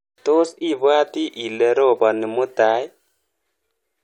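A short bit of recorded speech, and there's nothing technically wrong to point to anywhere in it.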